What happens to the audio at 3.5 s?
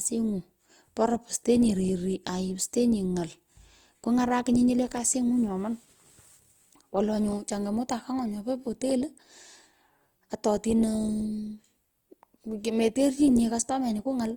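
At 3.5 s the speech is still passing through a low-rate codec, most likely Opus compression in its music (CELT) mode, and this runs through the whole clip rather than starting there. With too few bits, the encoder keeps each band's overall energy but refills the detail from folded lower bands or noise, so the speech sounds plainly grainy, rough and noisy. The roughness points to a bitrate near 24 kbps, though content still reaches about 20.2 kHz.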